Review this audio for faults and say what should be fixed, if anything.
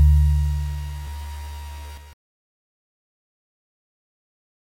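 Doubled audio track from 1.07 to 2.13 s: a second full-band copy of the sound trails the original by roughly 150 ms, about 5 dB quieter, with no decay or room colour, and it cuts in and out abruptly. The likely cause is a slower capture path or an edit leaving two out-of-step copies in the mix. To prevent it, route each source through a single capture path and check edits so only one copy of each region stays in the mix.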